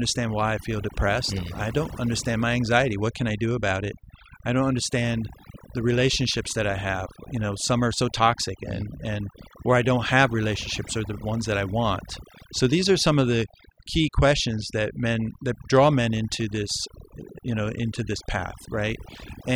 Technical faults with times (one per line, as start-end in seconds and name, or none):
0.00-19.55 overdone noise removal